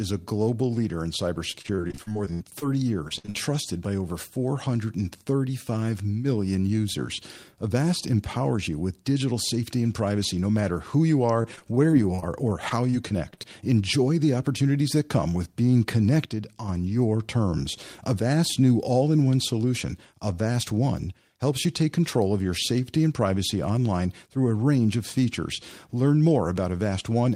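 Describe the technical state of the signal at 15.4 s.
At 15.4 s you're inside a jitter buffer speed-up running from about 15.15 to 15.47 s, just after "the opportunities that". The receiver was sitting on too much buffered audio and trimmed out short pitch-period chunks, around 40 ms in total, so the speech runs at about 111% speed with unchanged pitch and sounds hurried.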